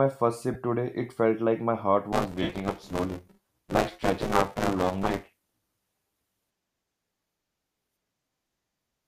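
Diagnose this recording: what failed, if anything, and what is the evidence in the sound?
Lost LE Audio frames on the Bluetooth link. A brief dropout at 0.54 s spans 15 ms. A longer one from 2.43 to 2.49 s lasts 60 ms, which fits eight 7.5 ms frames. The LC3 decoder concealed them by repeating the last spectrum with scrambled signs, so the sound smears into noise and fades.

Buffer tearing at the driver or buffer stage, from 2.12 to 8.13 s. A steady robotic buzz at 188 Hz rides on the sound, which fits a 256-sample buffer. About half of each buffer replays audio roughly 10 ms old, with hard joins at both edges. The slight grainy edge throughout is likely light LC3 coding.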